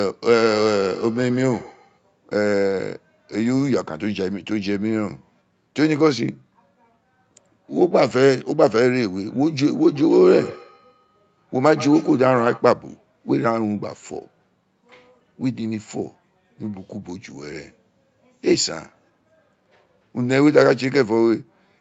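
From 0.39 to 1.99 s and again from 9.81 to 12.69 s there's feedback echo between two devices: one device's speaker leaks into the other's microphone, so speech comes back thinner and ringier roughly every 150 ms, peaking about 15 to 17 dB below the voice.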